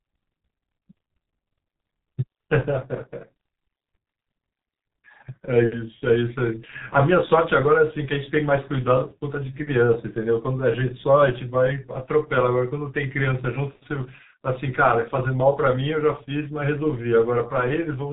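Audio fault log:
Throughout, G.723.1 codec. The speech is muffled and hoarse for the whole clip. Nothing is heard above 3.8 kHz, so sibilants and crisp consonant edges are lost. The codec damage is heavy. Consonants smear into each other. The coder models the voice in 30 ms frames and updates that model slowly, so fast changes blur. The rough, thin quality points to a rate near 6 kbit/s, the codec's higher mode.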